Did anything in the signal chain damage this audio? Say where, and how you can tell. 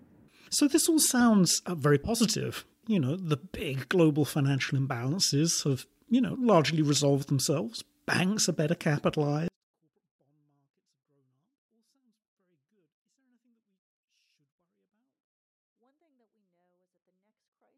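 Yes. At 9.48 s the speech suddenly drops to almost nothing and stays there to the end, but what's left is clean, with no distortion or noise change, just a flat cut of about 48 dB. That's a 24-bit alignment error (too quiet) at the sample-format conversion stage. The 24-bit samples were packed into the low bytes of a 32-bit word, then read as full 32-bit integers, so every value shrank by a factor of 256.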